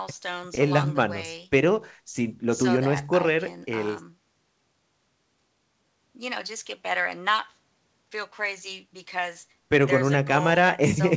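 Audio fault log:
No faults heard in this speech.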